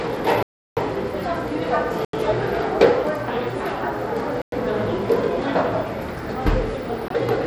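An everyday-sound recording with gritty, grainy treble that flickers throughout, which points to low-bitrate coding, likely Bluetooth SBC compression at roughly 96 kbps. Four blocks of digital silence cut in abruptly at 0.43–0.77 s (341 ms, which fits a 16384-sample buffer), 2.05–2.13 s (85 ms), 4.42–4.52 s (106 ms) and 7.08–7.10 s (21 ms), consistent with the output buffer not being filled in time.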